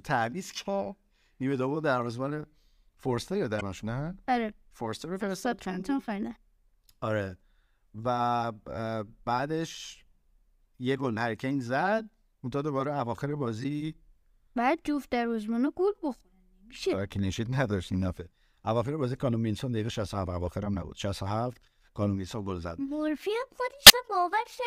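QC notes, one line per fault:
3.57–3.62 s, 13.60–13.65 s and 23.86–23.91 s: damaged data in a compressed stream. Each is a short disruption, about 50 ms, breaking into the speech. Corrupt bytes make the decoder misread those frames, lose sync and hunt for the next valid frame header.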